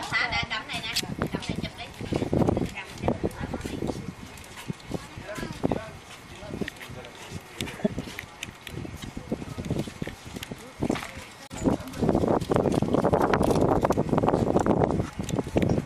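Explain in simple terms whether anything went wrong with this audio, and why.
Something did go wrong, five times. Each is a corrupt frame decoded: damaged compressed data was played anyway, causing brief chirps or noise bursts. They occur at 1.64, 7.73, 8.86, 11.46 and 14.52 seconds. The one at 7.73 s is the loudest.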